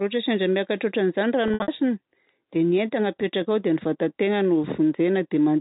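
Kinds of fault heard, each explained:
Packet loss with pitch repetition: from 1.48 to 1.68 s, about 140 ms goes missing in bits, patched by looping the last pitch period, so it sounds briefly held and buzzy.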